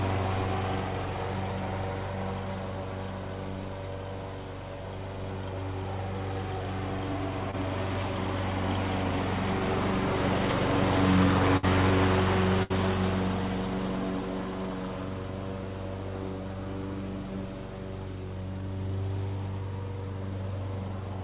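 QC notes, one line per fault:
7.51–7.55 s, short concealed packet loss: about 20 ms of audio failed to reach the decoder in time, so the receiver extended the preceding sound across the hole and blended back. It comes through as a brief smear or wobble within a band that stops at 4 kHz.
11.57–11.65 s and 12.63–12.72 s, burst of packet loss: each time about 60 ms of consecutive audio was lost. The receiver stretched the last sound over the gap for roughly 60–70 ms, fading it, giving a held buzz or dying hiss before the audio resumes with that stretch gone.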